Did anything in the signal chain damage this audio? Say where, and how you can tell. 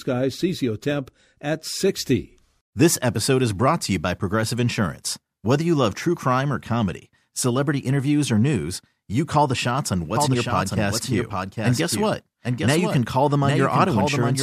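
Yes: a slower duplicate capture path likely mixed a second copy in, giving a doubled audio track from 10.16 s to the end, trailing by roughly 0.7 s and about 5 dB quieter.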